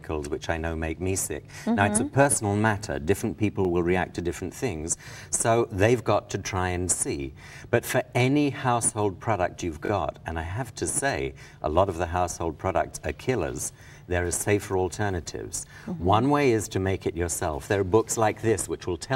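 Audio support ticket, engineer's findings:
Repeated buffer, five events: 1.52, 3.65, 6.27, 9.86 and 15.57 s. Symptom: short stutter, the same roughly 21 ms slice of sound replayed once, with a hard join at each repeat; at 9.86 s it plays twice more, about 43 ms in total. Segment length fits a 1024-sample buffer. Probable component: output buffer or audio driver. Mechanism: fresh data missed its deadline, so the last buffer was played again. Apparently no audio dropped.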